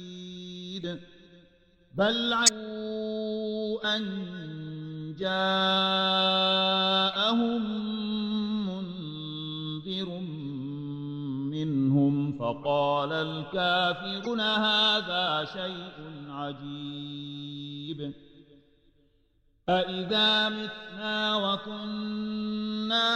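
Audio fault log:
2.44–2.49 s and 14.23–14.27 s, damaged data in a compressed stream: in two places the encoded stream carries corrupted bytes, so the decoder misreads the frames there, loses its lock on the frame structure and hunts for the next valid header before playback resumes. Each break lasts only about 40 to 50 ms, so it reaches the ear as a short, harsh blip or chirp that cuts across the sound.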